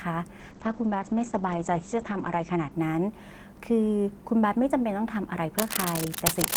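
Speech, with two technical faults. First, a call bitrate drop from 0.41 to 2.77 s: the encoder's rate fell from 32 to 10 kbps, with bandwidth narrowing from 20 kHz to 8 kHz, so the speech turns coarse and muffled for about 2 s. Then, from 5.58 s to the end, cable scratch noise, likely a worn cable or connector being moved, adds uneven scratching bursts roughly as loud as the speech.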